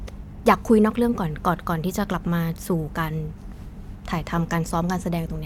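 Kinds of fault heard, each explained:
No technical faults can be heard in the signal of this speech recording.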